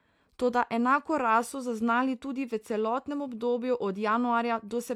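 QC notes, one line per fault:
No technical faults can be heard anywhere in the signal.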